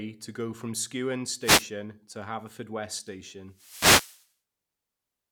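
Speech with two wireless microphone noise hits, at 1.40–1.68 s and 3.49–4.31 s, where the FM radio link fades and broadband static shows as bright vertical smears.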